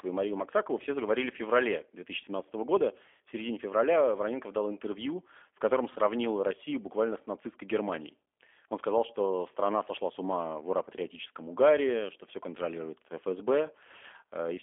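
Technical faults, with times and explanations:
Throughout, G.729 codec: the speech is band-limited to about 300 Hz to 3.4 kHz, with nothing above 3.5 kHz, and has a plainly rough, synthetic edge. This fits an 8 kbit/s G.729A stream, which rebuilds each frame from a vocal-tract filter, pitch prediction and sparse pulses.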